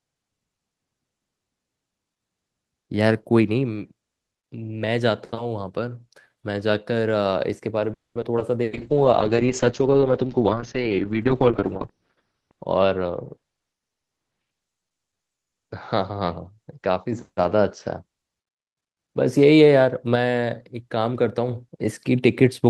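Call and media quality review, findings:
Call audio freeze, 7.93–8.17 s: sound smears into a fading buzz, then about 0.2 s of silence, resuming where it stopped. Likely jitter buffer underrun from delayed packets.

Short concealed packet loss, 8.21–8.24 s, 8.36–8.39 s, 8.39–8.42 s: brief smears or wobbles. Decoder concealment filled 10 ms, with 20 ms of audio lost, each time.

Call bitrate drop, 8.71–18.09 s: rough, watery, muffled sound. Opus encoder cut from 32 to 7 kbps, bandwidth from 12 kHz to 6 kHz, lowest for 3.2 s.

Jitter buffer speed-up, 12.33–13.97 s: hurried delivery at unchanged pitch, 111% speed. Receiver trimmed pitch-period chunks, around a fifth of a second in total, to drain excess buffering.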